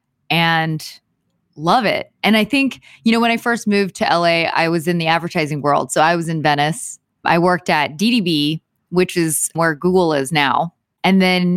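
Just speech here, and there's nothing technically wrong to point to anywhere in it, so no fault to time or trace back to a cause.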